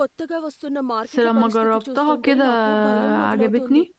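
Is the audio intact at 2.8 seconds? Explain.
Yes, at 2.8 seconds the speech is intact, with no dropout, glitch or other fault at that moment.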